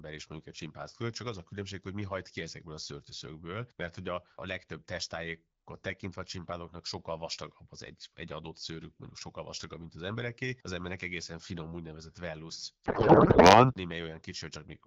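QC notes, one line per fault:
12.85–13.71 s, codec payload misread: for about 0.86 s the speech gives way to garbled, warbling noise that barely tracks it, as octet-aligned AMR frames are unpacked as bandwidth-efficient. On a spectrogram the harmonic striations vanish into smeared, noisy energy.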